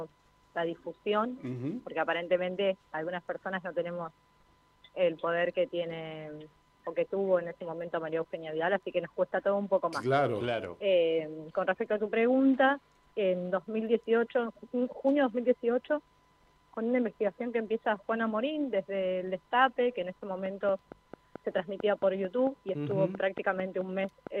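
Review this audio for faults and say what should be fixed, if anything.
From 20.46 s to 24.28 s there's a train of clicks: about twenty evenly spaced ticks at 4.47 per second, peaking around 10 dB above the sound itself. That steady, same-shaped pulsing is likely interference from nearby gear or a faulty connection or power supply. Next time, move the cabling and audio interface away from other equipment and check the connections before recording.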